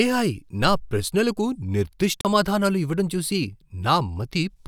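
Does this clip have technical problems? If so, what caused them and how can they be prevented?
Yes. A CD skip at 2.21 to 2.25 s: the laser jumped to another turn of the disc's spiral, so playback briefly mutes with a tick and resumes elsewhere. Prevent it by keeping the disc clean and unscratched and shielding the player from knocks and vibration.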